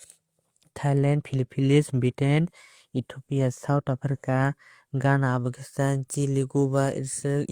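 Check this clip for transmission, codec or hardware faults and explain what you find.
I can't hear any fault anywhere in this speech recording. There is nothing in it that needs tracing to a cause.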